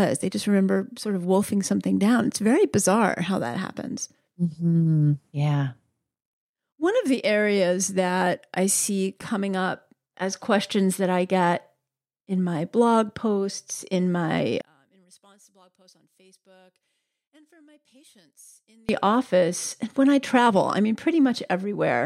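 One channel inverted, from 14.61 to 18.89 s: just after "blog posts in my", the speech drops by about 34 dB to a faint residue, and it returns at full strength with "office and when I". The likely cause is one stereo channel with reversed polarity. When the two nearly identical sides are summed to mono, the centred voice and its low end cancel, and only the small difference between the channels remains audible.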